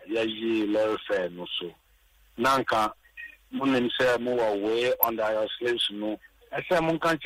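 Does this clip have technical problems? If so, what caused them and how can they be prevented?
Yes: DAB burbling from 5.03 to 5.08 s. Weak reception let a small share of bit errors slip past error correction, corrupting audio data so single sub-bands get short blips of noise, fitting about ten damaged frames. Unlike a dropout, the sound continues but with short blips of noise. Better antenna placement or stronger signal prevents it.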